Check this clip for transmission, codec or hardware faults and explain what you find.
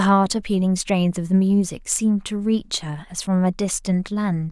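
Nothing audible in the speech points to a fault anywhere in the signal chain.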